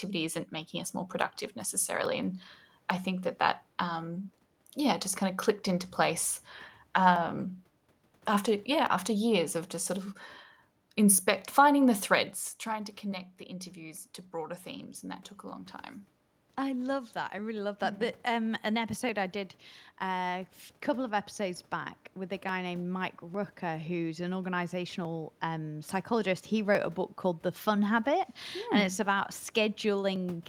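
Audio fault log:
0.36 to 30.16 s, clock drift buffer slips: a click recurs every 0.85 s while the speech runs, around forty in all. The likely cause is two devices' clocks disagreeing by roughly a tenth of a percent, so the buffer between them drops or repeats a short block of samples each time.
12.71 to 25.99 s, automatic gain rising: after the talker moves back at about 12 s and the input falls by about 11 dB, voice and room noise swell together slowly over several seconds, by about 8 dB, as the gain control pushes its level up to compensate.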